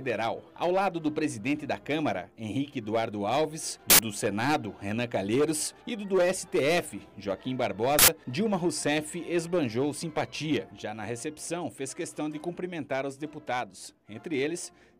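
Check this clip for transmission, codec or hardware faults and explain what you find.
Two uninitialised buffer faults are present, from 3.90 to 3.99 s and from 7.99 to 8.08 s. Each time, a block was played before any audio had been written into it, so leftover memory was output as samples. Each burst lasts about 93 ms, which fits a 4096-sample buffer, and is heard as a sudden burst of digital noise. On the waveform each appears as a dense rectangle; on the spectrogram, as a bright vertical band spanning the full frequency range.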